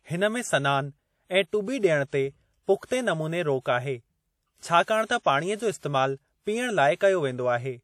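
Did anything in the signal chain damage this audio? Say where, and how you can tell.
Yes. The damage sits at the codec stage and runs through the whole speech clip, which carries plainly audible WMA compression artefacts. The audio has a ringing, washy quality, with a hiss that swells and fades along with the speech. That points to a transform codec with long blocks smearing its quantisation noise over tens of milliseconds around each sound and dropping weak spectral detail. The cause is likely an early WMA encoder at a low bitrate, consistent with about 48 kbps.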